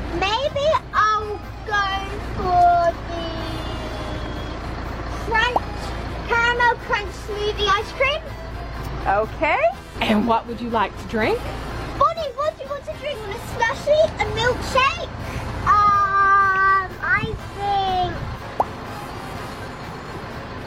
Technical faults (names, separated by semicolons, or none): damaged data in a compressed stream